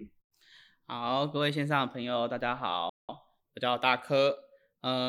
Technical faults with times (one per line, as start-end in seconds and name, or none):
2.89-3.09 playback stall